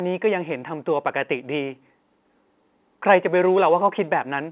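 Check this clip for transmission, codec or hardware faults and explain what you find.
No faults found here.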